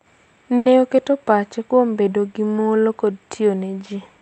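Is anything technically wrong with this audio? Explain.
Yes, there is a short stall from a late packet. From 0.57 to 0.67 s, just before "oketo pachne kuom bedo", a packet arrived late and the jitter buffer ran dry. The receiver stretched the preceding sound by 80 ms, then resumed from the same point. Nothing is lost, but that sound is held unnaturally long, and everything after it runs 80 ms later. The speech also passes through the WebRTC call path, with its top end stopping around 8 kHz, which fits the Opus codec.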